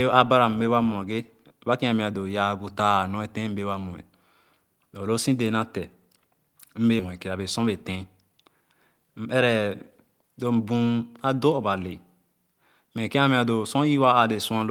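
At 6.99 s the speech makes a skip ahead: about half a second of audio never plays, and the material on either side is butted together with no fill. The buffer was holding later audio and jumped straight to it, so the sound lurches forward abruptly and a piece of the phrase is simply gone. On a waveform the envelope changes shape instantly at the splice, and a spectrogram shows formant tracks breaking off and restarting at different frequencies along one vertical seam.

From 7.08 s to 8.30 s comes a jitter buffer speed-up. Playback runs at 107% while pitch stays put, because the receiver repeatedly cut out pitch-period-sized slivers, roughly a tenth of a second in total, to draw down excess buffered delay. The delivery sounds slightly rushed and clipped. In the waveform the periodic cycles stay the same width but syllables come closer together. On a spectrogram the harmonic spacing holds steady while each voiced segment looks faintly compressed in time, with tiny discontinuities at the cut points.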